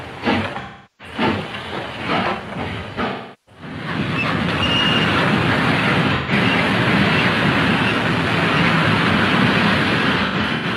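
AAC frame loss with concealment breaks up the sound four times. From 0.61 to 1.14 s and again from 3.08 to 3.62 s, about 384 ms of audio is lost each time. The decoder fills the gap from the last good spectrum, so both stretches turn smeared and noisy. At 6.15 s a 128 ms loss leaves a brief phasey blur. From 10.25 to 10.65 s, 213 ms drops out in scattered pieces, the longest about a tenth of a second, giving smeared, noisy patches.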